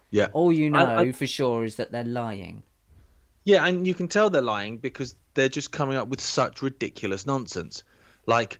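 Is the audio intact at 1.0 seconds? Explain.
Yes, the audio is intact at 1.0 seconds, with no fault at that moment.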